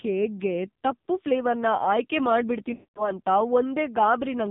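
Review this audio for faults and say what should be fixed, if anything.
The AMR narrowband mobile codec is audible for the whole clip. Nothing above 4 kHz survives, and the speech has a heavy buzzy, synthetic quality that fits a low mode around 5.9 kbps. The texture is what separates it from a plain low-pass filter, which would only sound muffled. The fix is to carry the call in AMR-WB or a higher AMR mode.

Lost AMR speech frames occur from 2.74 s to 3.13 s. The decoder stretches the last good sound and lets it fade toward silence, and the speech comes back weak or rough. The 220 ms of concealment fits about eleven lost 20 ms frames. A plain dropout cuts abruptly to silence, whereas this smears and decays. The fix is a stronger radio link or more error protection on the speech frames.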